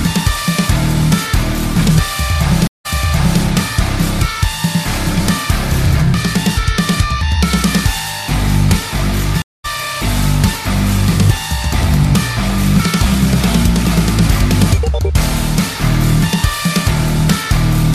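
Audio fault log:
2.67–3.41 s and 9.42–9.66 s, stream reconnect: the connection dropped twice, each time leaving a hole while the player reconnected and restarted its decoder mid-stream. At 2.67 s there is about 176 ms of silence, and playback resumes 557 ms earlier, so a stretch is heard twice. At 9.42 s about 221 ms of silence is followed by a jump roughly a fifth of a second ahead, so some material is lost. On a spectrogram each gap is a blank vertical column spanning all frequencies, ending in a hard or briefly faded onset. On the waveform it is a flat line followed by content that does not continue from what came before.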